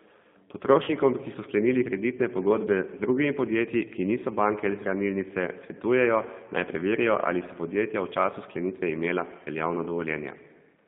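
The whole clip runs through a G.729 codec, and you can plainly hear it. The speech sits in a narrow line band from about 150 Hz to 3.6 kHz and has that slightly rough, synthetic edge that points to the 8 kbit/s CELP coder rebuilding it from a filter, pitch and a few pulses.

Then there's VoIP packet loss concealed by the speech codec. From 0.84 to 0.91 s, just before "ki so sklenili kreditne", the decoder stretches its last pitch and filter into a fading sound. That fits about 40 ms of lost frames, and the speech stays weak or distorted as it recovers. A shorter gap follows at 2.66 to 2.69 s, right after "ki so sklenili kreditne", which sounds like a single 10 ms frame patched over by the decoder.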